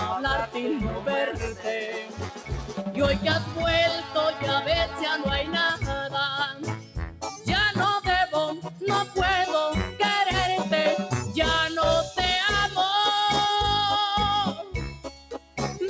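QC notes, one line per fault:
Throughout: noise suppressor applied to music or sounds. A suppressor built for speech treats the steady tones, ambience and tails in this material as noise and pulls them down, with gain swinging by around 10 dB. Onsets pass while sustained parts sink, so the sound pumps and thins.
0.90–1.07 s, 1.30–2.93 s, 4.01–4.16 s, 4.86–5.01 s, 6.52–7.47 s, 8.64–8.82 s, 15.04–15.57 s: sound cut by the noise suppressor. Held or decaying sound in these spans drops by about 6 to 10 dB, deepest near the end. Decays are clipped short, longest across the 1.3–2.9 s stretch.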